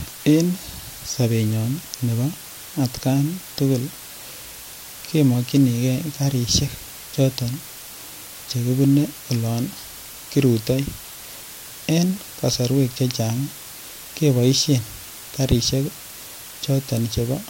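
Speech runs under a constant, even hiss for its full length, from low bit depth with dither. The hiss fits roughly 6-bit resolution, with dither added before rounding. The rounding error becomes steady white noise, only about 15 dB below the speech, with no added distortion.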